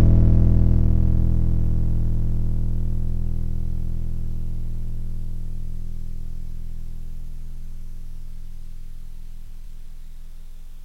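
At 9.46 s the music breaks into a garbled flutter that lasts until 9.84 s. This is frames out of order. Two neighbouring runs of audio, each about 186 ms long, were decoded in swapped order. The later run plays first, then the earlier one. That length points to runs of about four frames each. No time is lost. The passage is only rearranged.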